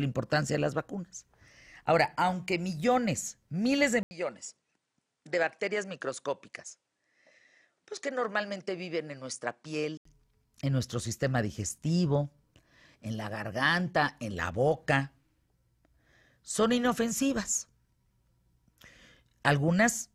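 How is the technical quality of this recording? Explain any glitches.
There's one clear glitch. From 4.03 to 10.05 s the input likely switched to a poorer device. After an 80 ms gap the sound turns duller and a bit quieter, with nothing above 10.4 kHz, a new faint noise floor and a level drop of around 5 dB, then it opens back up.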